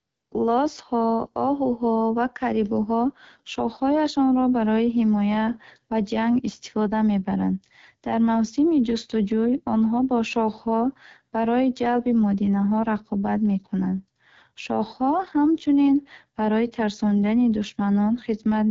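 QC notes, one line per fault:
Throughout: AMR wideband (HD Voice) codec. The speech was coded by a pulse-driven vocal tract model at one of its lowest rates, fitting about 8.85 kbit/s, so the audio sounds plainly rough and raspy. Nothing sounds above about 7.5 kHz.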